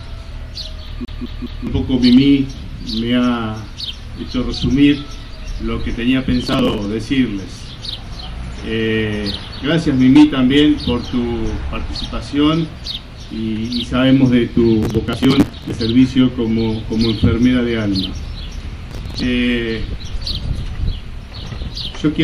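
From 1.05 to 1.67 s, a short slice of about 0.21 s repeats three times with a short mute at each jump. This is a CD stuck on one turn, where a scratch keeps throwing the laser back one track.

Gritty tearing bursts follow at 6.44 to 6.85 s, 14.83 to 15.79 s, and 18.91 to 19.23 s. This is processor overload crackle: dozens of missed deadlines skip small chunks, which fits buffers of around 10 ms.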